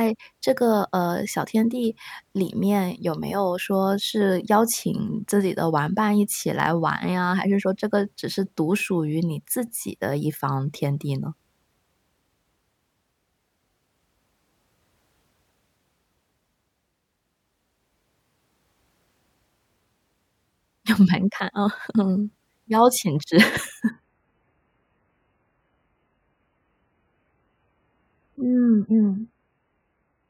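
A speech recording that drops to a lower-bitrate version of an adaptive stream at 23.9 s and stays there to the end. The switch is abrupt, with no gap. Before it, the sound is consistent with about 128 kbit/s MP3. After it, nothing remains above 3 kHz, and the audio turns dull and watery with more codec artefacts. That points to a very low-rate MP3 stream, around 8 kbit/s, served because the connection slowed.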